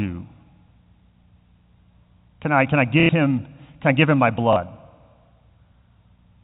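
Packet loss with the last packet repeated breaks up this speech clip at 3.0 to 3.09 s, between "I can I" and "him can I give", and again at 4.53 to 4.56 s, just after "I give him my". The receiver looped the last packet it received, leaving a robotic stutter at the first break buzzing near 33 Hz, which fits 30 ms packets, and a small blip at the second. The narrow telephone band of the G.711 coding is audible throughout.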